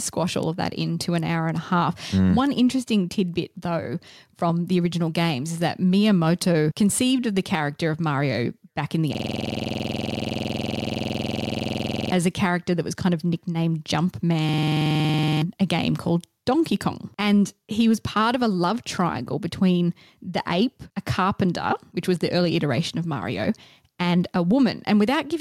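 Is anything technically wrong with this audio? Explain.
Yes, there are two problems.

Gain pumping runs through the whole clip. The level rises and falls by about 5 dB as the speech gets louder and softer, so soft and loud passages sit unnaturally close together and the speech sounds squashed. The likely cause is input gain set far too high, with a fast limiter or compressor clamping down on every peak.

A system hang loop occurs twice. From 9.15 to 12.12 s, just after "back in the", the audio locks onto a 46.4 ms fragment and repeats it at 21.5 Hz. That fits a 2048-sample buffer. It produces a rough, buzzy stutter until the speech resumes at "a character that was", and about 3 s of speech is lost. The same loop returns from 14.49 to 15.42 s, ending just before "a game called", and costs about 1 s. In each case the computer or driver stalled while the sound hardware kept replaying its ring buffer.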